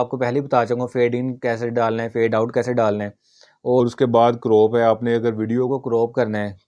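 Wrong sample rate from 3.80 to 5.70 s: the sound runs at 0.92 speed and about 1.5 semitones lower, which fits 24 kHz audio played at 22 kHz.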